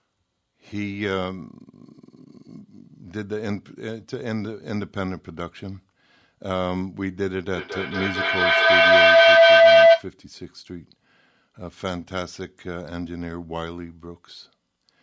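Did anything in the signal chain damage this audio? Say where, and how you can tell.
Yes. There's a feedback howl from 7.52 to 10.12 s, and it's an acoustic loop at the call stage: two devices in the same room picking each other up. You can hear a tone settle somewhere around 700 Hz and swell to about 15 dB over the speech, pulsing roughly every fifth of a second. That pulse is the round-trip delay of the loop. Each pass came back louder and narrowed onto the frequency the room and hardware favoured, until the loop was broken.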